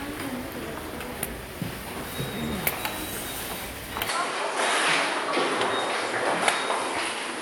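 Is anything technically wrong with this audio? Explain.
Yes. At 4.09 s the sound abruptly turns duller and boxier, with nothing above 11.4 kHz, and stays that way to the end. There is no gap at the changeover, but the level shifts by roughly 5 dB and a new, faint background noise appears, about 40 dB under the signal. This is likely an input switched to a poorer device partway through, with a narrower-band microphone taking over and bringing its own tone, level and noise floor.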